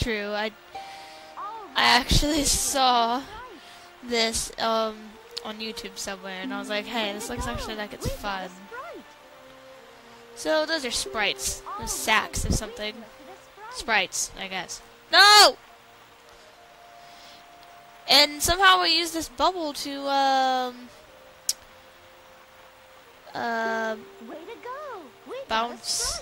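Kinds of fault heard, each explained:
Lost LE Audio frames: a brief, noisy smudge at 24.33 s, lasting about 10 ms, which fits a single missing frame. The LC3 decoder covered the gap by repeating the previous spectrum with randomised signs, so that instant turns hazy.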